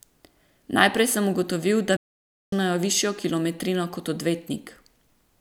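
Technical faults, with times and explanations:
1.96 to 2.53 s, playback stall: the speech halts abruptly after "sem ugotovil da" and the output goes completely silent for about 0.56 s, then resumes with "višjo kilometrino kot". The gap sits mid-phrase rather than at a natural pause, which is why it reads as a dropout and not as hesitation. The likely cause is the player running short of buffered data or its audio thread being blocked, so no samples reached the output until it recovered.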